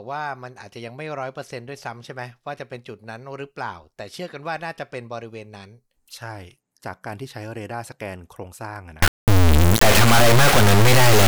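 At 9.02 s the speech gives way to integer read as float, lasting to the end at 11.28 s. The sound fits 32-bit integer samples being interpreted as 32-bit float, so values land near zero or far past full scale, producing a harsh, extremely loud buzzing square wave.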